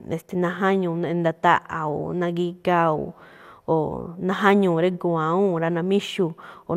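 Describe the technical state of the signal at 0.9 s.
At 0.9 s, as throughout, the speech sounds swirly, hollow and smeared, with blurred attacks and nothing above 16 kHz. This is likely generation loss from about ten passes through an MP2-style codec near 128 kbit/s. A single encode at that rate wouldn't sound this degraded.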